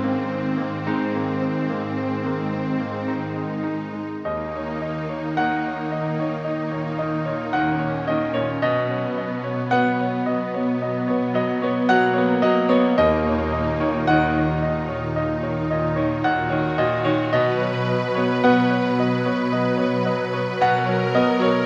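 Nothing here trips up the ear, and no technical faults turn up anywhere in the recording.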